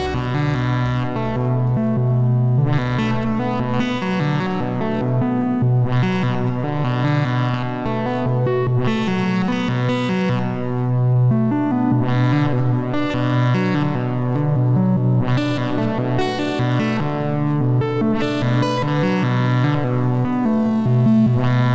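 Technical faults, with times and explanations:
3.98, 7.51 and 11.13 s, short concealed packet loss. About 40 ms of audio went missing at the first point and 20 ms at each of the others. The receiver patched each gap by extending the preceding sound, then blended back. This leaves a brief smear or wobble.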